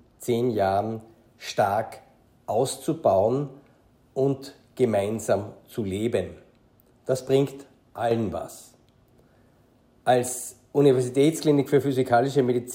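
From 7.96 to 8.11 s a sudden gain jump drops the audio and noise floor by about 6 dB, likely an unramped digital gain change, showing as a square-edged waveform dip and darker spectrogram band.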